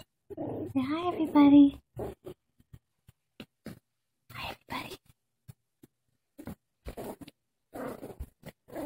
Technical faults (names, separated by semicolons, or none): block of digital silence